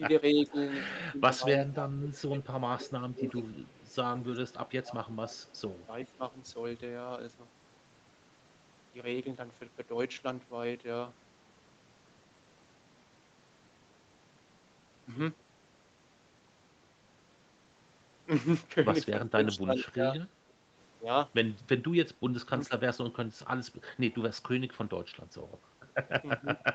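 Speech from a call, with two recurring faults. Speech suppressed in double talk shows as the talker's level dipping roughly 15 to 25 dB or breaking up at 0.33–3.44, 4.47–6.22, 19.29–20.16, 22.43–22.69 and 26.39–26.61 s. This is likely an echo canceller ducking everything while both sides talk at once. It differs from packet loss because the dips follow the overlapping talk rather than leaving abrupt gaps wherever packets drop. An echo leak is heard at 0.46–0.68, 1.76–3.94 and 5.39–6.16 s as a faint copy of the voice trailing by a fixed 381 ms, quiet to barely audible. The cause is probably loudspeaker sound slipping past the loudspeaker side's canceller. That steady, distinct delay sets it apart from room reverberation, which smears continuously instead of repeating. The call's microphone processing, with nothing above 8 kHz, is standard.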